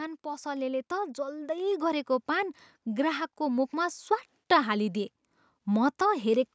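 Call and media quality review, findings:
Automatic gain rising, 0.22 to 4.97 s: AGC judged the input too quiet and ramped its gain up about 8 dB. Speech and background swell together slowly.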